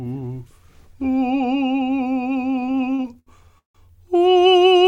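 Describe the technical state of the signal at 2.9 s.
At 2.9 s the music falls within repeated stalls (stutter), running from 2.51 to 3.78 s. Packets arrived too slowly, so the buffer emptied thirteen times. Each gap was filled by continuing the last sound, up to 160 ms. Nothing is lost, but the passage drags and stutters.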